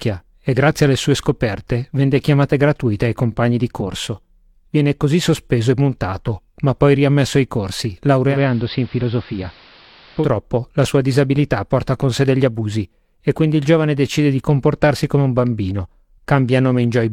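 At 8.27 s, just after "poi riammesso ai corsi", the speech blends from digital radio to analogue. The receiver lost the digital signal and crossfaded over about 128 ms to the station's AM broadcast. The sound turns dull. Level drops by about 2 dB. A steady hiss rises, roughly 25 dB below the speech. At 10.30 s it blends back to digital, just before "la sua disabilità porta".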